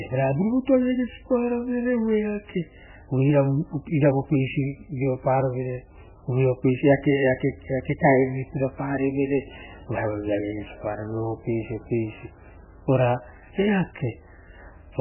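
Speech with heavy MP3 compression throughout. Nothing survives above 3 kHz, and weak frequencies flicker, giving a watery, swirly sound. This likely comes from a very low bitrate, near 8 kbps.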